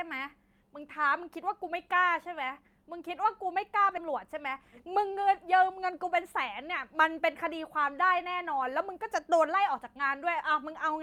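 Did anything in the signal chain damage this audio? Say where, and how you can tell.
Yes. Network and jitter buffer: around 3.97 to 3.99 s there's a skip ahead, with roughly 0.4 s of speech dropped and the two sides spliced together with no gap.

Right after, from 4.10 to 6.71 s, a jitter buffer speed-up runs the speech at 104% speed, same pitch, trimming pitch periods to shed about a tenth of a second of backlog.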